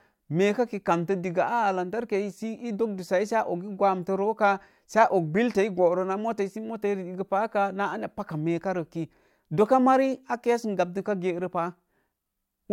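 No technical faults can be heard anywhere in the speech recording; the signal stays continuous and intact throughout.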